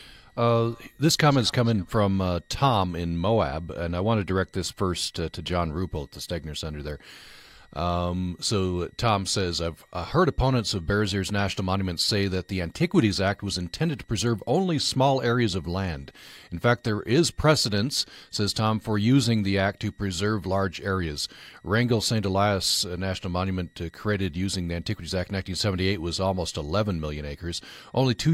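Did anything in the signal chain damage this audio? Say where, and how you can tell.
Yes. A faint high whistle sits under the speech for the whole clip, wandering between about 1.82 and 1.99 kHz and roughly 40 dB below the speech. That is switching supply whistle in the analogue stage: a switching power supply in audible burst mode or beating with another, its pitch shifting with load.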